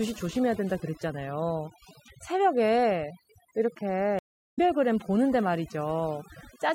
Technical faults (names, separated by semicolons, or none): overdone noise removal; stream reconnect